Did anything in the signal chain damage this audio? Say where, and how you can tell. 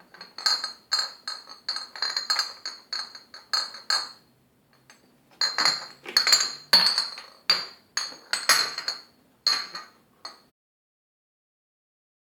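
No, nothing in the signal chain damaged this audio, and the fade-out at the end is smooth.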